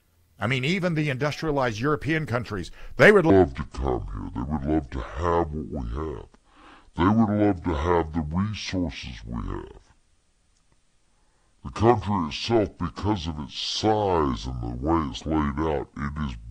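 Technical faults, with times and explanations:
3.30–16.51 s, section at the wrong speed: right after "countries they would" the speech slows to about 0.61 times its proper rate and stays that way to the end, with the pitch dropping by roughly ten semitones, so it sounds deep, sluggish and drawn out. Pitch and timing fall together, which sets it apart from a pitch-shift fault that lowers the pitch but keeps the original pace. The likely cause is playback or editing against the wrong clock.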